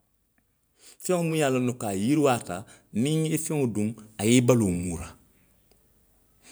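Speech recording with automatic gain rising from 0.65 s to 4.79 s: the gain control judged the input too quiet and lifted it by about 8 dB over roughly four seconds. Background noise swells along with the voice, which separates it from a talker simply moving closer.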